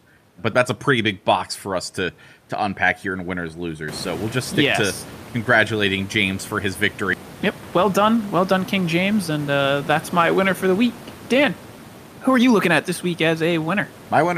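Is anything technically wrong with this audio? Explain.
Yes, two faults in this speech clip.

Skip ahead, 7.13 to 7.15 s, right after "for his": about a second of audio was dropped while later audio was already waiting, so playback jumps straight forward. The speech before and after is joined almost seamlessly, with nothing filling the gap.

Jitter buffer speed-up, 7.77 to 9.59 s, ending just before "that's my winner for": the buffer still held more audio than its target, so the receiver repeatedly removed pieces of one or a few pitch periods, about 150 ms in total. Speech plays at 107% speed with unchanged pitch and sounds slightly hurried. The room noise that rises near 4 s sits about 19 dB below the speech.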